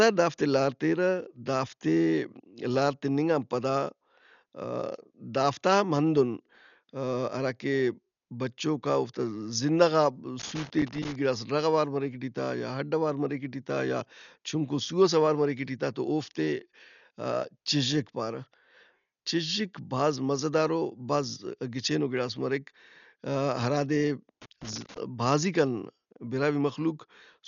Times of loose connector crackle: 10.39-11.15, 24.42-24.99

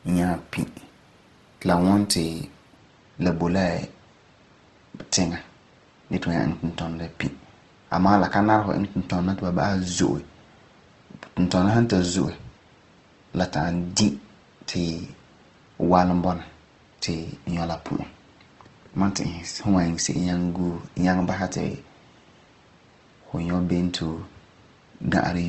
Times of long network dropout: none

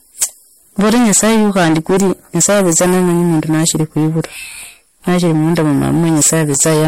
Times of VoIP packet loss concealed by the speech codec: none

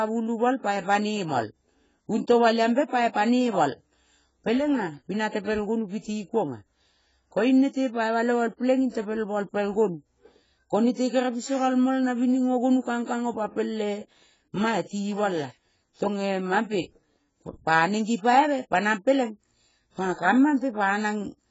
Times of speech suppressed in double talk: none

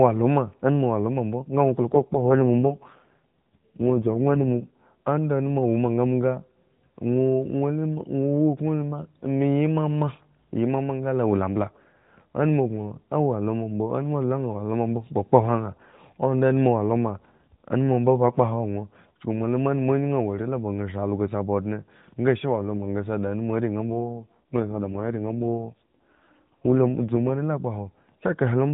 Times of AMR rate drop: 1.92-4.74, 23.85-27.39

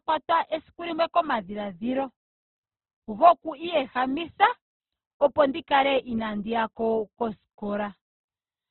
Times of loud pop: none

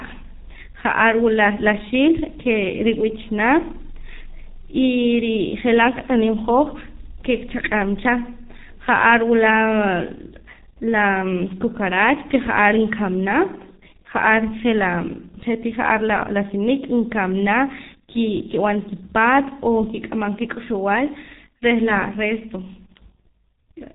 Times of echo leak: none

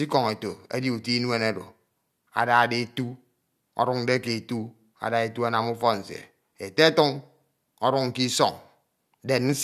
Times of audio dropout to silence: none

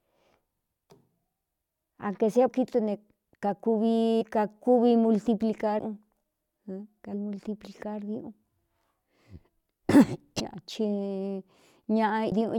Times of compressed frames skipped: 2.47-2.49, 4.20, 5.78, 7.12, 10.39, 12.31

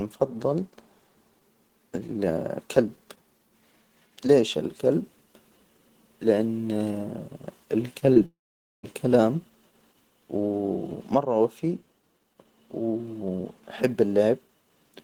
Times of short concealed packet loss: 7.99-8.18

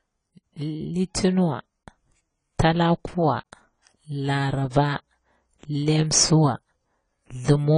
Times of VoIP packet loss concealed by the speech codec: none

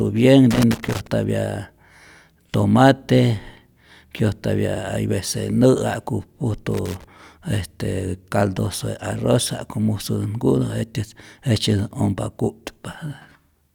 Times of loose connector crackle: 0.51-1.07, 6.72-7.04

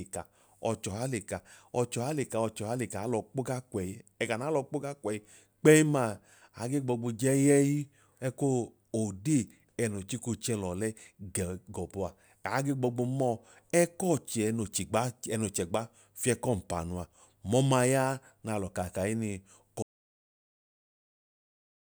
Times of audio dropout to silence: 19.82-21.90

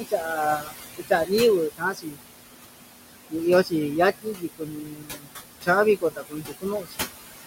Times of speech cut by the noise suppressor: 0.00-1.31, 1.70-2.20, 4.22-5.45, 5.97-7.05

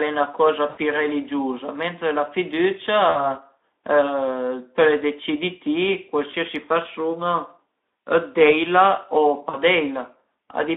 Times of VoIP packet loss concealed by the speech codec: 0.69-0.79, 3.09-3.32, 6.31-6.35, 9.49-9.57

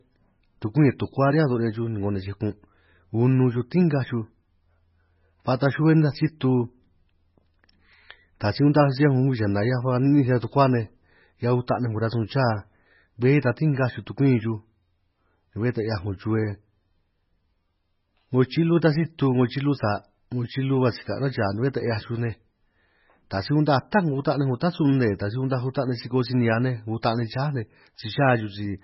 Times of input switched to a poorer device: none

